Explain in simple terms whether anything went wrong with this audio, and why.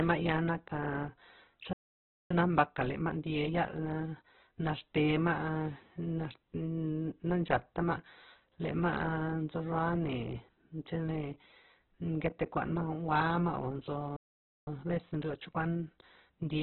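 Opus compression, throughout: the speech sounds muffled and grainy, with nothing above about 4 kHz, like an old phone line. This is likely from heavy Opus compression, which squeezed the sound so hard that the upper frequencies were dropped and the remaining detail turned rough.

Playback stall, at 1.73 to 2.31 s and 14.16 to 14.67 s: the speech cuts to silence mid-flow for roughly half a second each time, then resumes. The player likely ran short of incoming data or was briefly blocked, so it had nothing to play.

Time-compressed catch-up, at 2.31 to 4.59 s and from 14.67 s to the end: after each gap the speech runs hurried, 1.25 times normal speed the first time and 1.15 times the second, with unchanged pitch. The player drops and blends tiny slices of audio to make up the lost time.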